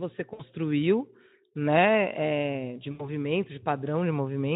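VoIP packet loss concealed by the speech codec strikes at 0.33–0.44 s and 2.91–3.15 s. About 60 ms, then 80 ms, of packets go missing, and the Speex decoder extrapolates them. On a spectrogram, frozen harmonics smear and fade; the waveform shows a decaying stretch before recovery.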